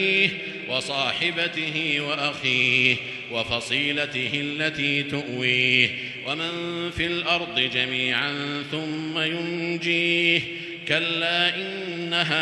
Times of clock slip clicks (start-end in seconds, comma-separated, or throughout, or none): 0.11-12.41